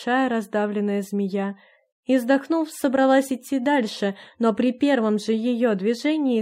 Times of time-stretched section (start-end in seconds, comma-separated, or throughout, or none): none